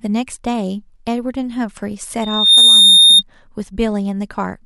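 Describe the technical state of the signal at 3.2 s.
At 3.2 s a loudspeaker feedback squeal is sounding, spanning 2.21 to 3.23 s. The loop howls at 3.7 kHz, swelling within a fraction of a second to a piercing tone well above the speech. A spectrogram shows one bright horizontal line at 3.7 kHz.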